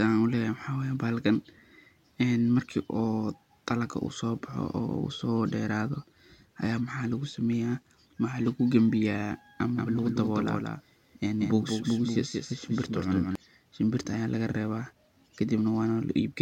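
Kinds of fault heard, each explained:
Doubled audio track, 9.77 to 13.35 s: a second full-band copy of the speech runs about a fifth of a second behind the original and only about 5 dB quieter, so each syllable is echoed by a clean, dry repeat with no room tail. It switches on and off abruptly, starting just before "shimbirta aya lagarewa". This is likely a second capture of the same signal through a slower path being mixed back in.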